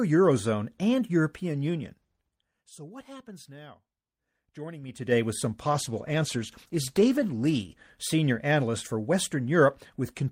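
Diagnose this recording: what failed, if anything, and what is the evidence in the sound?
A call bitrate drop, originating in the network and codec stage, begins at 5.64 s, right after "with some", and lasts until 7.87 s, just before "senior analyst for". The bandwidth estimate fell and the Opus encoder went from 48 to 16 kbps, holding the floor for about 2.2 s. The speech turns coarse and watery. On a spectrogram the upper band thins and goes blotchy across that span. The waveform envelope stays steady.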